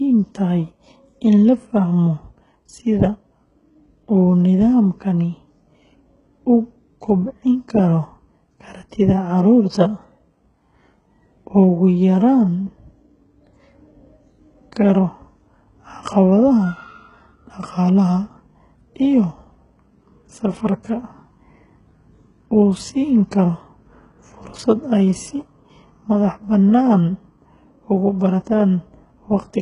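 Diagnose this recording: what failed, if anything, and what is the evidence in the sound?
The codec stage failed: the speech is band-limited throughout, with nothing above 11 kHz, and the top band sounds synthetic, with gritty, lispy sibilants. This points to likely HE-AAC compression at a very low bitrate, around 12 kbps, rebuilding treble by copying lower bands upward under a coarse envelope.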